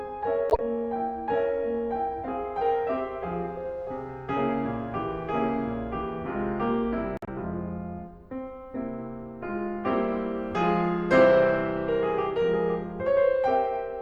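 At 0.50 to 0.60 s and again at 7.17 to 7.29 s, a corrupt frame decoded: damaged bits across a few frames were played anyway, throwing misplaced energy into the music as a chirp, squeak, blip or burst of noise, louder the first time.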